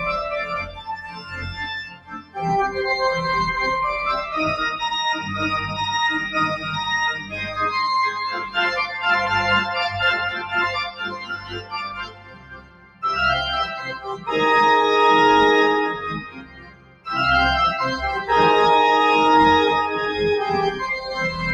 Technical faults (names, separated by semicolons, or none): noise suppressor applied to music or sounds; sound cut by the noise suppressor